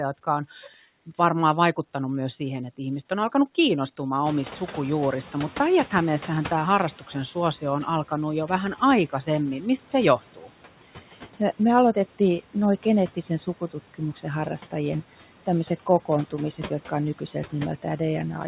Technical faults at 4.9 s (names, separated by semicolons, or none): noise suppressor artifacts; noise suppressor catching up